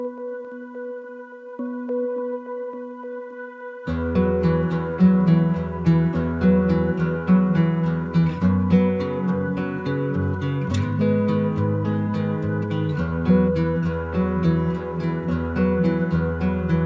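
No technical faults can be heard anywhere in the clip. The audio has come through a working call path, and nothing reaches above 8 kHz, which fits a wideband codec such as G.722.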